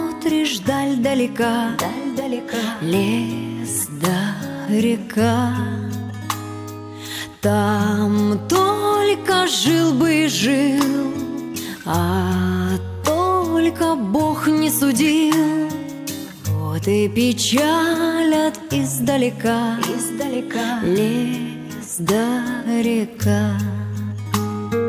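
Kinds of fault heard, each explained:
No audible faults detected.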